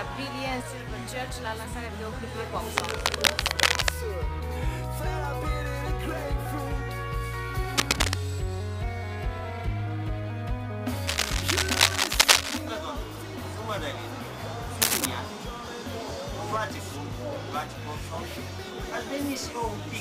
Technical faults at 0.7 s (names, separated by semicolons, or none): none